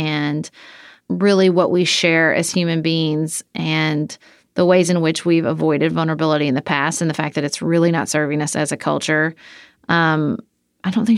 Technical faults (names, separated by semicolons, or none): none